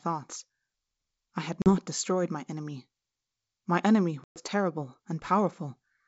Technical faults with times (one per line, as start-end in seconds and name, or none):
1.62-1.75 packet loss on an ADPCM call
4.24-4.42 packet loss on an ADPCM call